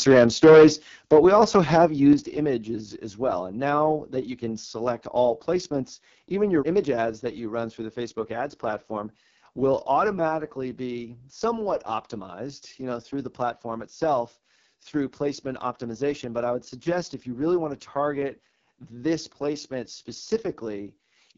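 From the very start to 0.68 s the loudest moments crack and rasp, their peaks sounding flattened and harsh. This is microphone overload, with the input likely set too hot so that the signal ran about 9 dB past the converter's ceiling and a sizeable share of the samples, around one in seven, had their tops sliced off. The flat-topped waveform is what produces that gritty edge on each peak.

Overlapping that distortion, the level drops abruptly at 0.12 s by about 2 dB, then falls again at 1.11 s by about 6 dB, and once more at 2.13 s by about 6 dB, just before "images as well". Each step takes the speech and the background down together, in an instant rather than a fade. That points to the microphone volume being stepped down, likely by call software reacting to the clipping and cutting the device's input gain in discrete notches.

Throughout the clip the speech has a rough, buzzy, raspy texture, with nothing present above about 7.4 kHz and the topmost band sounding hissy rather than detailed. 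This is the AMR wideband (HD Voice) codec at one of its lowest settings, and the heavy damage fits a rate around 6.6 kbit/s. At that rate the pulse-based model of the voice is too coarse to rebuild the harmonics cleanly, so the voiced sounds come out grainy, and the band above 6.4 kHz is filled with synthetic noise rather than real detail.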